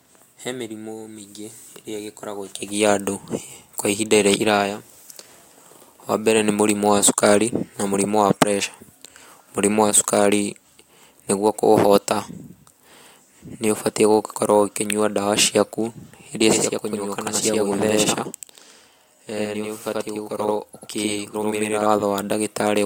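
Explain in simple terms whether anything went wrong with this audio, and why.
From 16.53 s to 21.86 s, just after "ũkĩnyua ndawa ciaku iria", the speech sounds doubled, with a quick slap echo trailing each sound. This is channel delay (doubling): one channel arrived about 85 ms late, which fits a 4096-sample buffer, and was mixed with the other.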